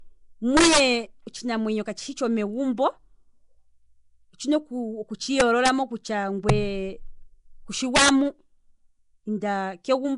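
From the start and all the way through, the speech has a rough, hissy halo and a smeared, underwater quality, with nothing above 10.6 kHz. That's likely Nellymoser compression, coding small blocks at a fixed bit budget that fits roughly 44 kbps and filling starved bands with noise.

Then come integer overflow cracks at 0.57 to 0.80 s, 5.40 to 5.69 s, 6.49 s and 7.96 to 8.09 s, where peaks ran about 4, 4, 2 and 6 dB past the limit. Those peaks wrapped to the opposite sign instead of clipping, so the cracks are violent and much sharper than ordinary distortion.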